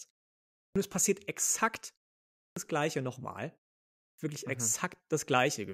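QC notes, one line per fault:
0.71 s, 2.52 s and 4.14 s: clipped start after a pause. Each time, speech resumes after roughly 0.6 to 0.7 s of silence and the first 44 to 46 ms are missing. The output device sleeps during the gap and wakes too late, so the onset starts abruptly.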